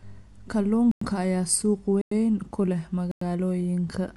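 A short speech recording with two distinct faults. Across the whole clip the audio is dull and band-limited, with nothing above about 11.5 kHz, and it carries plainly audible coding damage: a rough, fluttering noise clings to voiced sounds where high-frequency detail has been replaced by filler noise. This is likely Dolby Digital compression at a low bitrate, around 64 kbps, where the encoder narrows the band and starves many frequency lines of bits. Separately, there are three hard-edged silences of 100 ms each, at 0.91–1.01 s just before "ayaa suuq", at 2.01–2.11 s between "ayaa suuq" and "ku leh", and at 3.11–3.21 s just after "ku leh". This is a gap between chunks. The audio arrives in 1-second blocks with silence left between them, so the speech itself is intact but breaks off abruptly at every join, giving a regular stutter.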